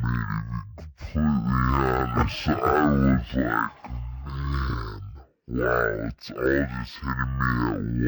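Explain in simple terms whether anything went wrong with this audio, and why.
Yes, something went wrong, and it affects the whole clip. This is speech that suffers from stereo read as mono. A stereo file stores left and right samples alternately, and here the player treated that interleaved stream as one channel, so every sample pair became two consecutive moments. The result plays at half speed, exactly 0.5 times normal, and a full octave low, 12 semitones down, making the speech sound slow, deep and dragged from start to finish.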